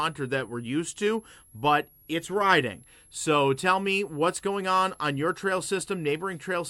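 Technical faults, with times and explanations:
Throughout, switching supply whistle. A thin, high whistle sits under the sound the whole time. Its pitch wanders between about 10.9 and 11.4 kHz rather than holding still. It runs roughly 30 dB below the main signal, so it is faint but steady. A switching power supply is cycling at a rate the ear can reach, or two supplies are beating together. As the load shifts, the switching rate moves, and the whistle's pitch moves with it.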